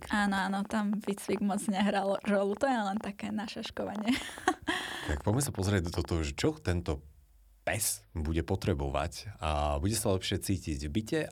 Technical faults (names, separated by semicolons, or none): train of clicks